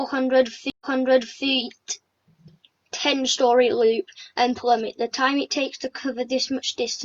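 At 0.7 s the sound cuts out for 107 ms, then picks up 650 ms earlier, repeating material already heard through about 1.46 s. This is a stream reconnect: the connection dropped, the player restarted its decoder, and the server resent earlier audio.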